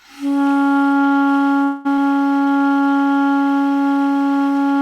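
At 1.63 s the everyday sound stops moving forward for about 215 ms, until 1.87 s. The last fragment is stretched into a decaying buzz-like tail rather than dropping to silence. When the sound resumes, it continues from exactly where it halted, with nothing lost. This is a call audio freeze. The likely cause is that packets stalled in transit and the jitter buffer ran dry. The receiver concealed the wait by extending the final sound, adding roughly 215 ms of delay.

A skip ahead follows between 1.97 and 1.99 s. Playback lurches forward with almost no bridging, only about 3 ms of fill, and around a tenth of a second of sound is simply absent. The material on either side is butted together, so the event sounds abruptly clipped rather than paused. This happens when a stretch of audio is dropped while later packets are already queued. Dropping it also removes about 100 ms of the delay the freeze had added.

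From 2.40 to 2.94 s there is a jitter buffer slow-down. The buffer was running short, so the receiver rebuilt its reserve by repeating single pitch periods and pause fragments many times over. Across this stretch playback runs at about 82 % of normal speed, adding 108 ms. Pitch holds steady, but the sound is audibly drawn out.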